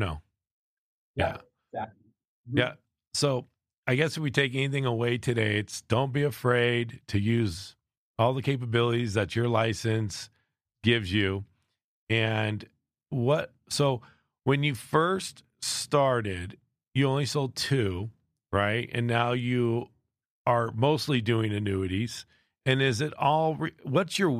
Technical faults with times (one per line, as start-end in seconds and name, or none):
none